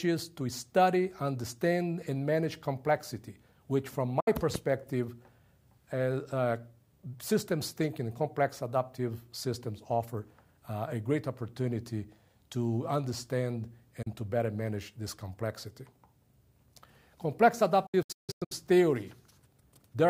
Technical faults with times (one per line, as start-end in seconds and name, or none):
4.20-4.28 digital broadcast dropout
14.02-14.07 digital broadcast dropout
17.86-18.52 digital broadcast dropout